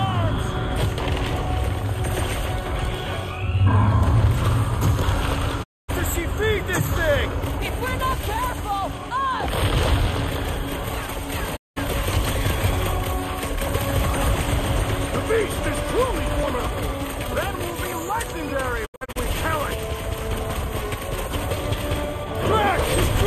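Digital broadcast dropouts mute the audio at 5.62–5.90 s, 11.55–11.78 s and 18.85–19.17 s, each with a quick 20 ms fade. The receiver lost valid frames, discarding 240, 192 and 168 ms of programme. The last dropout is scattered as short holes, the longest 72 ms.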